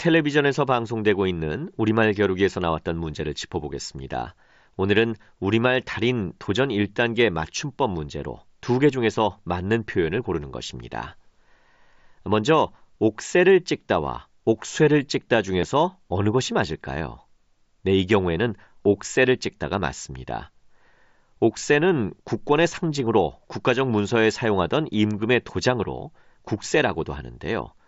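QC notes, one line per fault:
15.61, 18.85 and 23.06 s: concealed Bluetooth headset packet loss. Gaps of 15, 15 and 7.5 ms are bridged with a matched copy of the preceding waveform. They leave no silence, no level dip and no sustained buzz.
25.11 s: electrical switching spike. A sharp snap lands on top of the speech without replacing any of it, more abrupt than the concealed gaps. A nearby switch or static discharge coupling into the audio line is the likely cause.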